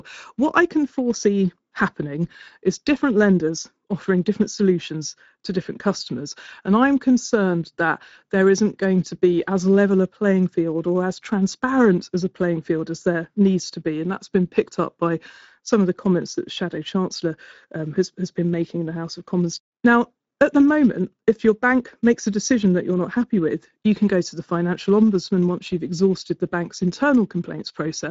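From start to finish the speech carries Speex codec damage, and it's plainly audible. Speex is a CELP coder, so it rebuilds the voice from a predicted spectral envelope plus a coded excitation. With this few bits for the excitation, the voice comes out grainy and hoarse. Nothing gets through above 7.7 kHz, which fits a wideband mode at roughly 17 kbps, and the top band just below that cut-off sounds like shaped noise rather than real detail.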